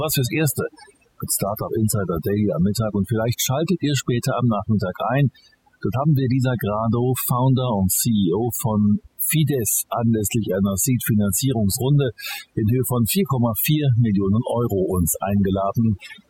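From start to finish, the background between phrases drops to near silence, broken by twinkling specks. The fault is overdone noise removal: a noise reduction stage was pushed too hard on a noisy recording, cutting individual frequency bands deeply or entirely whenever they sat close to its noise estimate. Softer components of the speech fell under that threshold too and were stripped away along with the noise.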